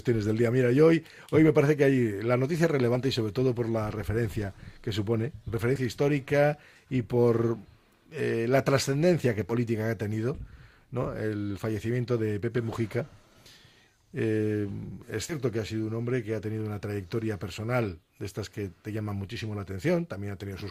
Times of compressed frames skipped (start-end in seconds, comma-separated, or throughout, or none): 2.95, 5.75-5.77, 9.49-9.53, 15.29-15.35